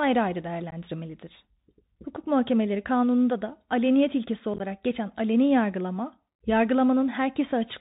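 The Bluetooth CVSD headset codec, present throughout the speech, codes each sample as a single up-or-down bit at 64 kHz with an adapting step, so nothing above 4 kHz survives, s sounds turn scratchy, loud bright moments distort, and granular hiss sits underneath.

Unconcealed Bluetooth headset packet loss strikes at 0.71 s, where about 15 ms, a couple of packets, drops out as an abrupt hole. From 4.54 to 4.61 s, between "kanununda da aleniyet ilkesi" and "geçen aleni", about 30 ms is lost in bursts of up to 15 ms, roughly four packets, giving a chopped stretch.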